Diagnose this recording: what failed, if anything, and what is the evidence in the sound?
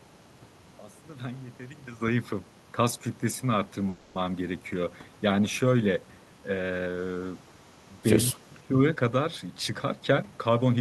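The network stage most likely held packets long enough for the jitter buffer to run dry, causing a call audio freeze. From 3.89 to 4.25 s the speech stalls into a fading buzz for about 260 ms, then resumes where it stopped, so nothing is lost but a gap is inserted.

In the call processing, the far end's echo canceller likely let some of its loudspeaker pickup through, producing echo leak. A copy of the speech delayed by 200 ms returns faintly, about 40 dB below the speech from 7.67 to 8.01 s and about 35 dB below from 8.38 to 8.56 s.

Also in call processing, the echo canceller likely mistook simultaneous talking for echo and attenuated the near talker, so speech is suppressed in double talk. From 8.31 to 8.78 s the speech dips by roughly 20 dB in places, across about half a second.

At the buffer stage, the jitter buffer held more audio than its target and trimmed pitch-period slices to catch up, a jitter buffer speed-up. 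From 8.96 to 10.77 s the speech runs at 111% speed at unchanged pitch, shedding roughly 200 ms and sounding hurried.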